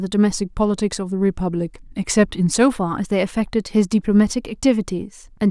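From 0.35 to 2.71 s, the clock-matching software likely made a drift correction step, dropping the playback rate in a single jump to rebalance its buffer. Speed falls by 5.63 percent and pitch sinks by a full semitone (100 cents) together, so the speech sounds slowed and detuned downward for over two seconds, then returns to its normal rate and pitch.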